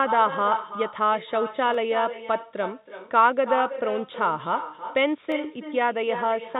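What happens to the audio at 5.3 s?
At 5.32 s there is a single sharp click, a thin vertical line across the spectrum. It likely comes from dropped samples: a fraction of a millisecond of the stream goes missing, and the waveform jumps abruptly to a later value. Nothing audible is lost.

The echo with no canceller is also present at that moment, as throughout. The far end's loudspeaker feeds its microphone, so the sound returns about 300 ms later. That copy sits about 10 dB down and sounds thinner.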